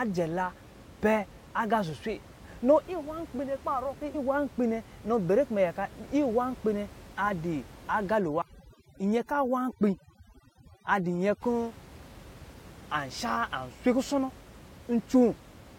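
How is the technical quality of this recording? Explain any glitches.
The recording has two faults, both around the 8 to 11 second mark. Room noise sits about 21 dB below the speech.

From 8.18 s to 11.42 s, overdone noise removal takes hold. A noise reduction process was set far too strong. It pulls individual frequency bands down or shuts them off whenever they come close to its idea of the noise. The quieter parts of the speech get caught too. The room background drops and breaks up into twinkling specks.

At 8.41 s, compressed frames are skipped. Several compressed frames were never played, either lost from the file or rejected by the decoder as damaged. The gap fits about three frames of roughly 23 ms each, so around 70 ms of audio is missing. The speech jumps forward.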